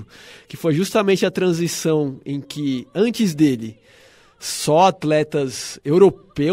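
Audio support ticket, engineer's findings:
No audible faults found in this speech recording.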